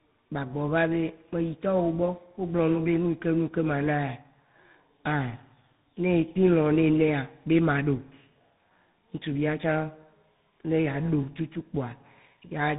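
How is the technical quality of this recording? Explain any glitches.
The quality is limited by tandem speech coding throughout the clip. The speech passed through two speech codecs in a row, with a plain telephone link between them. The sound points to a GSM-style coder first and a CVSD-style coder last. Each stage decoded the speech and coded it again, so the second coder worked on the first one's damaged output. The result is rougher and noisier than a single codec would give. Nothing is present above 3.8 kHz.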